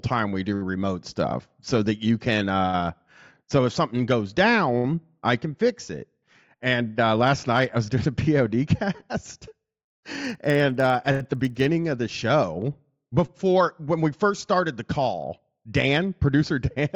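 From 9.45 to 11.65 s, just before "of the show before", a resampler restarted on every block while converting 16 kHz to 48 kHz. Each 50 ms block lacked its neighbours' samples at the edges, leaving a 20 Hz ticking buzz. Unlike dropout clicks, it is strictly regular and follows the signal.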